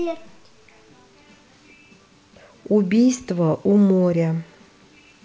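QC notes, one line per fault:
No faults found; the speech carries the ordinary G.722 call-path character at 64 kbps, with nothing above 8 kHz.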